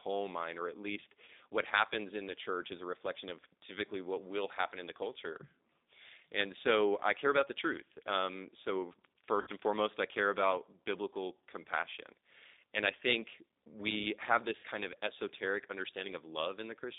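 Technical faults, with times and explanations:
Throughout: G.729 codec. The speech has the rough, slightly synthetic texture of a low-rate model-based coder, which fits G.729A at 8 kbit/s. The decoder rebuilds each 10 ms frame from a vocal tract filter, a pitch predictor and a few pulses rather than the actual waveform, so fine detail is replaced by an approximation. The damage is plainly audible, and the line passes only about 250 Hz to 3.7 kHz, leaving the speech thin and muffled.
1.25–1.30 s, 9.41–9.49 s and 14.58–14.66 s: VoIP packet loss concealed by the speech codec. Audio went missing between "mine or at least" and "what happens in the", just before "and foremost I care", and between "think we have this" and "of esoteric". The first gap is about 30 ms, which fits one lost packet, and the later two are about 60 ms, which fits two. The decoder filled each gap by repeating its last pitch and filter with falling gain, so the sound smears into a brief fading stretch of extrapolated sound. 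Because each frame builds on the one before, the speech stays weak and distorted for a moment after it resumes.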